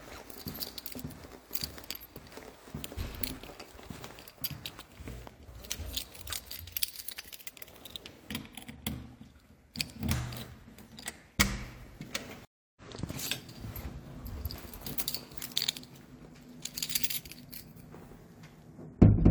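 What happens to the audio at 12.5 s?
A stream reconnect runs from 12.45 to 12.81 s. The connection broke, leaving about 0.31 s of silence, and a fresh decoder resumed with a brief fade-in. Unlike a simple dropout, the sound comes back roughly 0.3 s further along, so that stretch is skipped.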